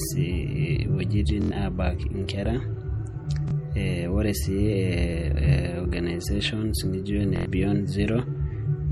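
Throughout the speech, a plainly audible watery, swirling texture comes from weak frequency components switching on and off between frames, likely from MP3 compression at a low bitrate around 48 kbps. The treble still reaches about 21.4 kHz, so this is swirl rather than a dulled top end.

At 1.42 to 1.51 s, 3.48 to 3.51 s, 5.11 to 5.13 s and 7.36 to 7.45 s there is a repeated buffer. Audio arrived late and the same 23 ms slice played again with a hard join, which fits a 1024-sample buffer. The first and last events repeat four extra times as a stutter. The middle two repeat once. Exact copies set this apart from a dropout's silence.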